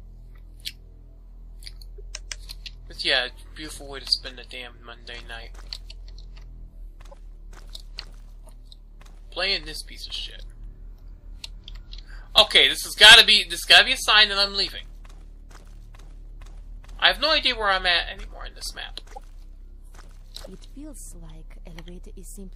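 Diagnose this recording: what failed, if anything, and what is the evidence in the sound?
The codec stage failed: corrupt frames were decoded and played. Short chirpy blips land at 1.98–2.00, 7.11–7.14, 12.78, 19.12–19.18 and 20.42–20.47 s, the loudest near 12.78 s at about -15 dBFS. Damaged bits sent energy to the wrong frequencies for a frame or a few.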